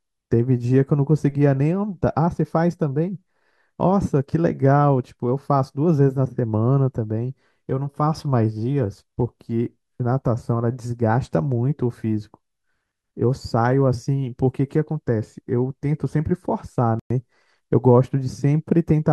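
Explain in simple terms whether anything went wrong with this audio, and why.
Something went wrong at about 16.99 seconds, and the likely cause is a Bluetooth stall. Radio interference held up the wireless packets carrying the speech, so the headphones used up the small reserve of audio they keep on hand and had nothing left to play. The sound drops to silence for about a tenth of a second, until 17.10 seconds, and then the speech carries on once the delayed audio arrives.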